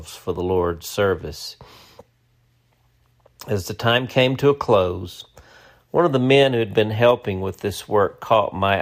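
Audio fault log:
8.31–8.74 s, hard clipping: right near the end, the speech runs about 1 dB past what some stage in the chain could pass, so the tops of its peaks get sliced flat. Those squared-off tops add harmonics high up the spectrum, which ride along as crackle on the loudest moments.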